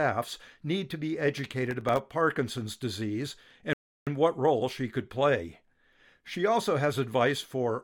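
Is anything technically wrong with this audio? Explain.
Yes, there are two faults in this speech clip.

From 1.38 to 1.98 s, a burst of gritty crackle tears across the speech, made of many tiny silent dropouts packed close together. This is processor overload crackle. The processor fell behind and missed a run of deadlines for very short audio buffers, leaving a hard-edged gap of silence each time. The length of each gap points to buffers of roughly a millisecond and a half, with something like fifteen missed across the burst before the load eased.

From 3.73 to 4.07 s, the speech stops dead into silence and then picks up exactly where it left off, with nothing skipped. This is a rebuffering stall. The player ran out of downloaded audio and paused until more arrived, so it inserted about 0.34 s of dead air rather than dropping any content. The pause itself is clean, but it breaks the natural timing of the speech.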